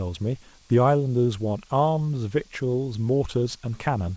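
The speech comes through a call path with no technical fault, its content stopping at 8 kHz in a way that fits a G.722 wideband codec running at 64 kbps.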